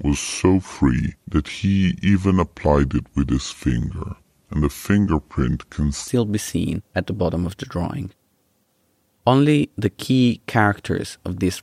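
From the start to 6.08 s, a section at the wrong speed: the playback clock for this stretch likely ran slow relative to the rate the audio was captured at, so it plays at 0.72 times its proper speed. Because speed and pitch are tied together, everything in that opening section sounds dragged and lowered by about five semitones, heavy and sluggish, until the jump back to normal speed at 6.08 s.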